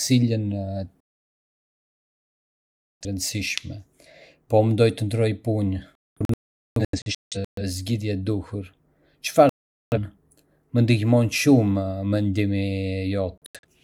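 At 1.02 s the speech falls silent for about 2.0 s, until 3.06 s: a digital broadcast dropout, where the receiver lost good frames and muted. After "ndërroj punë" at 5.95 s it breaks into several short holes up to 7.62 s, the longest about 0.43 s. There is one gap from 9.49 to 9.98 s, and brief holes from 13.38 to 13.66 s. On a waveform and spectrogram these show as flat, empty blocks with abrupt edges.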